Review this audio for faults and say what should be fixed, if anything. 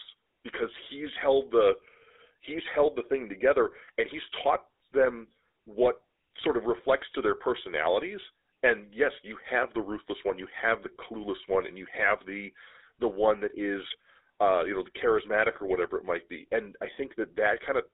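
The speech carries GSM full-rate codec damage from start to finish, and it is plainly audible. The band runs only from 300 Hz to 3.7 kHz. The voice sounds buzzy and gravelly. This codec models the vocal tract and drives it with a coarse, regularly spaced pulse excitation. The roughness comes from that thin excitation. The sound fits the 13 kbps full-rate coder. To prevent it, capture or route the audio over a wideband path instead of a GSM link.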